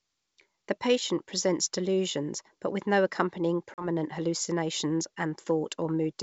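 At 3.74 s the speech drops into a hard-edged 40 ms silence, the gap a couple of lost packets would leave. This is packet loss on an ADPCM call. With the wideband G.722 coding, which sounds consistent with 64 kbit/s, the decoder's adaptive predictor and step size lose track of the sender's during the hole. When the speech resumes it is disturbed until they resynchronise, which is complete by about 3.88 s.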